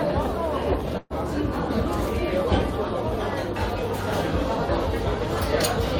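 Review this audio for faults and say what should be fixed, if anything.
From 0.97 to 1.13 s there is a burst of packet loss. Several packets in a row arrived too late or not at all. The receiver stretched the last sound it had over about 127 ms, letting it fade, and a brief silence of about 10 ms follows. When the audio resumes, roughly 120 ms of material is simply gone. A plain dropout would cut straight to silence, but this gap is papered over before the sound skips ahead. A larger jitter buffer with forward error correction or redundant packets would prevent it.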